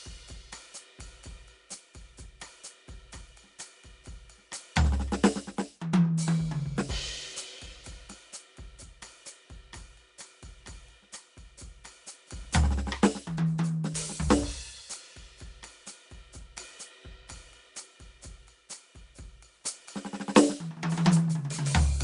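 A music clip with Nellymoser compression audible throughout: nothing above 10.6 kHz, and a plainly audible rough, hissy noise fill and smeared, underwater texture where weak bands were replaced with noise. The likely cause is Flash's Nellymoser Asao codec, at a damage level that fits around 44 kbps.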